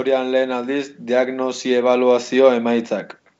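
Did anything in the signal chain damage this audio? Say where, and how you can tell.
No, nothing damaged this audio.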